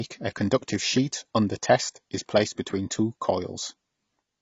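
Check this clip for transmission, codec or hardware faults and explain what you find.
The speech carries one codec fault, present from start to finish. It sounds like AAC compression, likely AAC-LC at a low bitrate, which fits something around 24 kbps. Nothing is heard above about 7.6 kHz, so the top of the spectrum is simply gone. The encoder quantises each frame's frequency lines coarsely to save bits. It drops the highest band. The damage is plainly audible: the speech is dull and smeared.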